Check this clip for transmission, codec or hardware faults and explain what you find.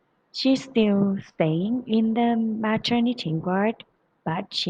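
Nothing stood out on listening to this speech recording.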